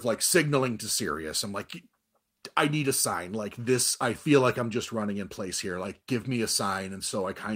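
No technical faults can be heard anywhere in it.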